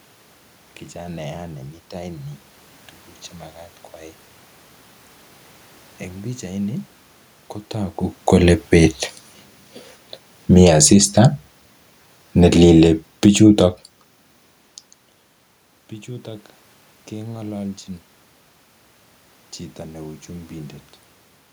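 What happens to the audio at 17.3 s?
Nothing goes wrong at 17.3 s: the speech carries on intact, with only the room's own background noise beneath it.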